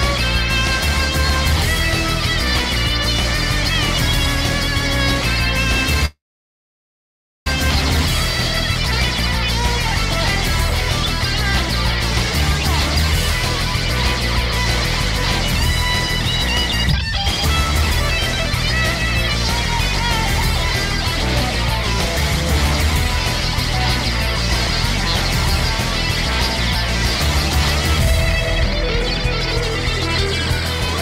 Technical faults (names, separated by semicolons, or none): call audio freeze; skip ahead